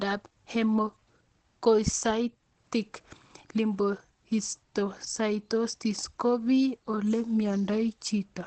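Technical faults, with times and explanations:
Throughout, Opus compression: the speech is band-limited with nothing above 8.4 kHz, and it sounds muffled and hoarse, with plainly audible coding damage. The likely cause is Opus running in its SILK speech mode at wideband, which models the voice rather than keeping full band detail. That trades clarity and breathiness for efficiency, and the degree of damage fits a low rate of around 16 kbps.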